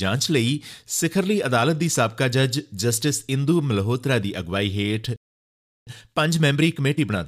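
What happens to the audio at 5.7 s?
At 5.7 s the sound is in the middle of a playback stall that runs from 5.16 to 5.87 s, a silence of about 0.71 s. The flow stops abruptly and the output stays empty until playback recovers. The likely cause is the player running short of data or its thread being blocked. What separates this from a brief dropout or a click is its length: a stall leaves a held, noticeable hole lasting most of a second, not a momentary tick or gap.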